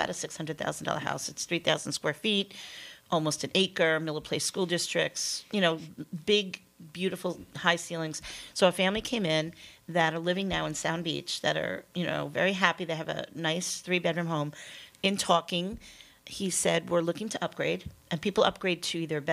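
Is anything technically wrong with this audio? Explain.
No, nothing technically wrong can be heard in this audio; the signal stays steady and intact throughout, with no audible disturbance at any point.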